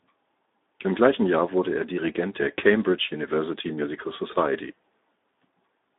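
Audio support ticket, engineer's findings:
Speex codec throughout. Plainly audible coding damage on speech. Band 250 Hz to 3.7 kHz, nothing above 3.8 kHz. Excitation starved of bits, which fits about 11 kbps.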